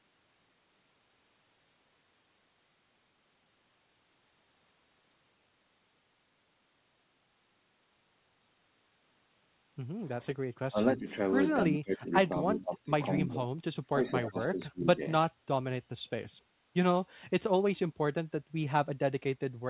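Speech suppressed in double talk runs from 10.21 to 10.78 s, 10.97 to 11.11 s, 11.69 to 12.13 s, 12.47 to 12.92 s, 13.24 to 14.11 s and 14.28 to 15.02 s. Each dip is likely the echo canceller mistaking simultaneous speech for loudspeaker echo and pulling everything down. The sound sags by about 10 to 25 dB for about 150 to 500 milliseconds each time.

An echo leak appears at 14.22 to 14.29 s. A delayed copy of the sound, about 300 ms late and roughly 10 dB below the direct signal, slips through. This is likely an echo canceller that failed to remove all of the loudspeaker pickup, and it is heard as a faint, brief repeat.

Background gated by the echo canceller follows from 15.32 to 15.47 s. The canceller clamped the microphone while the loudspeaker played, so the room tone drops by about 20 dB for roughly 150 ms and then returns. Throughout the clip the audio is band-limited to 4 kHz, which fits a G.711 call codec.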